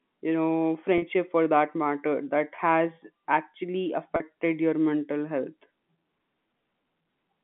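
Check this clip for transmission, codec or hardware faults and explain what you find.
There is one fault, packet loss with pitch repetition, occurring three times in this telephone-band speech. The G.711 A-law line itself passes roughly 150 Hz to 3.5 kHz.

The gaps fall at 0.98 to 1.02 s (40 ms, between "you know" and "for that matter that"), at 2.56 to 2.58 s (20 ms, just after "for that matter that"), and at 4.16 to 4.20 s (40 ms, just before "your mental health"). Their lengths fit one or two 20 ms packets. At each gap the receiver filled the hole by looping the last pitch cycle, so each sounds like a brief, slightly buzzy held tone. On a waveform the gap shows as repeated cycles fading in level. On a spectrogram the harmonics run frozen and flat before the speech resumes.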